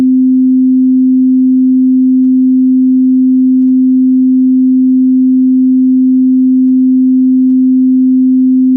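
Nothing goes wrong in this everyday sound recording; it simply comes across the way audio does after a normal call connection, with the top end stopping around 8 kHz as you'd expect from a call codec at its usual settings.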